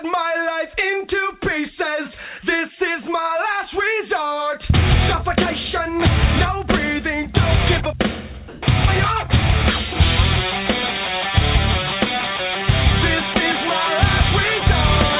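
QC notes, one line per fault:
8.48–8.62 s, comfort noise in place of the background: for 140 ms the real background, sitting about 22 dB below the loudest passages, turns into a flat, featureless hiss about 4 dB different in level. This is likely discontinuous transmission, with the receiver synthesising noise while the sender pauses.
13.34–13.36 s and 14.60–14.62 s, sound dropped by the voice detector: in each spot 20 ms of sound vanishes under the same steady noise, capped at 4 kHz like the rest of the call audio. The sender's detector likely mistook quiet material for background and stopped sending.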